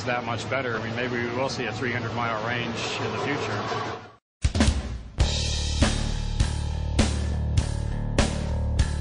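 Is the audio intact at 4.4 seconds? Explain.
No. At 4.41 s there is pre-echo: the codec spread quantisation noise across its block, so a hiss about 22 dB louder leaks roughly 19 ms ahead of the attack, seen as a smear before the onset. Throughout, the sound is watery, likely MP3 compression at a low bitrate around 40 kbps, visible as flickering spectral holes.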